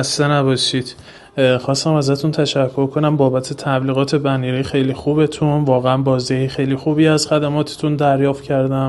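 No technical faults are audible anywhere in this audio.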